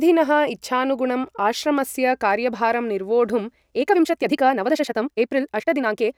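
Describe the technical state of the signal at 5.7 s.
At 5.7 s the speech sounds rushed, running about 1.58 times faster than normal while its pitch stays unchanged. This is inside a time-stretched section that begins at 3.69 s, right after "इच्छानुगुणं आश्रमस्य कार्यभारं निर्वोढुं", and lasts until the audio ends at 6.18 s. The likely cause is software squeezing this stretch to fit a shorter length and preserving pitch by dropping short pieces of the waveform, which produces the abrupt jump in pace and the hurried texture.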